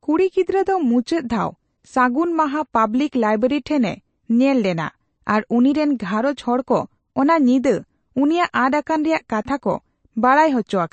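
A speech recording with plainly audible MP3 compression damage throughout, most likely from an encoder starved of bits. The spectrum stops dead at about 8.3 kHz, so sibilants lose their top, and weaker spectral detail flickers in and out between frames, giving the voice a watery, swirly texture and softened consonant onsets. The depth of that damage fits a low bitrate somewhere around 35 kbps.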